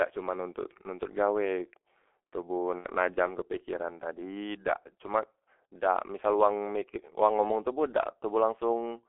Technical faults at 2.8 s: G.723.1 codec; VoIP packet loss concealed by the speech codec

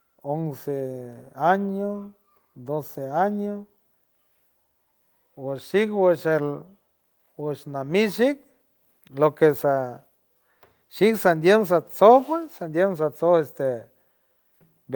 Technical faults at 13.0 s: none

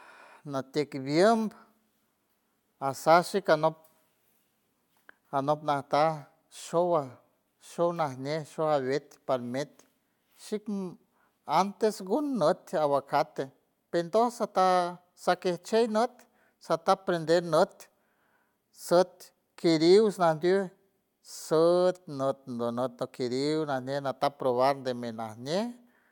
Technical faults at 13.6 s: none

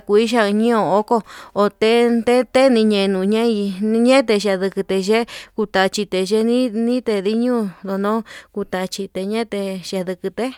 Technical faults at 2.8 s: none

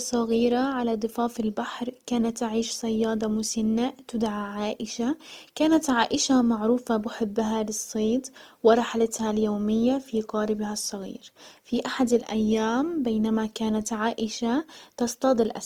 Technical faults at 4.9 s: Opus compression

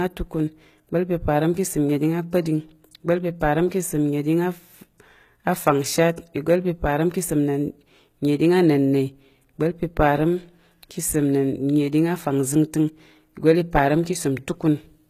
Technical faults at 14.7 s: HE-AAC compression

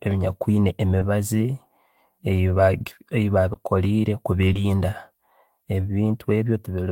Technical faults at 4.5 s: short concealed packet loss

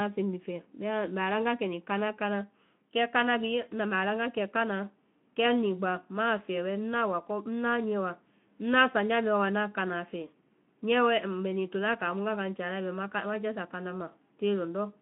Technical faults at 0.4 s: none

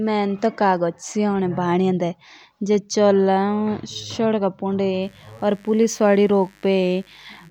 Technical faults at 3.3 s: none

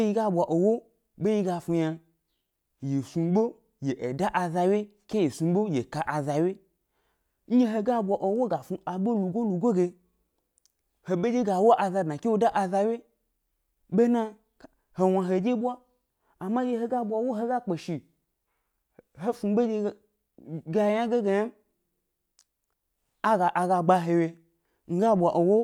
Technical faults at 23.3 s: none

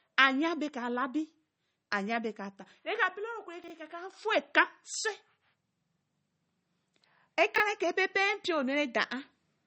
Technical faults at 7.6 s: MP3 compression; chunks out of order

